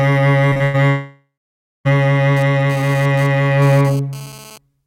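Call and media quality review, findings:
Repeated packet loss (robotic sound), 0.49–0.76 s: network/jitter buffer, four gaps concealed by repeating last audio, longest 100 ms; music turns choppy with pieces missing.

Long network dropout, 0.90–1.87 s: likely network outage, about 0.96 s lost; concealment buzz fades, then roughly 0.57 s silence before music resumes.

GSM phone buzz, 2.37–4.58 s: nearby 2G handset in data transfer, RF pulses rectified in audio path; raspy 217 Hz buzz, intermittent, about 23 dB below music.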